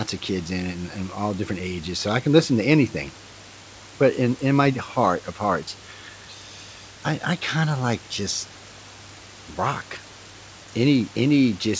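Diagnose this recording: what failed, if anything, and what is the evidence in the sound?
Nothing failed: the speech arrives through the call path with the expected wideband-codec ceiling at 8 kHz, which fits G.722, and the room noise sits about 24 dB below it, with nothing in the sound pointing to a fault at any stage.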